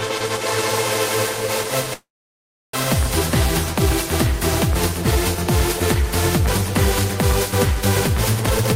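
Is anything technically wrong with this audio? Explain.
Yes, there are two faults. From 1.93 to 2.75 s there is a call audio freeze. The last sound carries on briefly, then about 0.68 s of silence follows. The likely cause is packets held up in transit, leaving the jitter buffer empty. The audio then resumes exactly where it stopped, so nothing is lost, which distinguishes it from a dropout. It adds an 800 ms delay.

From 8.41 s to the end there is a jitter buffer speed-up. The receiver cuts out short pitch-period slices to drain excess buffered delay, roughly 0.3 s in total. The audio runs at about 173% speed and sounds hurried, but the pitch stays the same, unlike a plain fast-playback fault.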